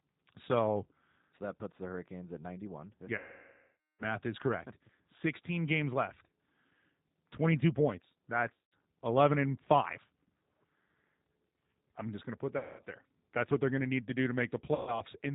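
Throughout, the speech is intelligible but slightly rough and synthetic, with a boxed-in sound and nothing above 4 kHz. That is the G.729 codec at 8 kbit/s, plainly audible here. It rebuilds each 10 ms frame from a vocal tract filter, a pitch predictor and a few pulses rather than sending the waveform itself. The sparse pulse excitation gives the grainy, artificial texture, and the narrowband design removes the upper frequencies.

From 3.18 to 4.04 s the speech smears into a stretched buzzy tone or coloured noise that steadily weakens. This is VoIP packet loss concealed by the speech codec. About 810 ms of audio went missing, which fits roughly 27 lost 30 ms packets. The decoder kept extrapolating from its last pitch and filter settings while lowering the gain, so the sound fades toward silence. Because each frame is predicted from the one before, the speech stays thin and distorted briefly after packets resume.

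The same stretching and fading returns, more briefly, at 8.54 to 8.73 s, 12.58 to 12.82 s and 14.75 to 15.01 s. The missing stretches there are about 180 ms, 210 ms and 120 ms, each followed by a short, weakened recovery.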